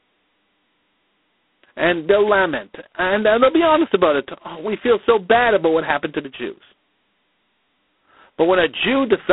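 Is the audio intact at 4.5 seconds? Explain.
No: G.726 ADPCM spans the whole clip, including 4.5 s. Coarse difference coding, which fits 16 kbit/s, leaves harsh rasping hiss tracking the speech, with nothing above 3.9 kHz.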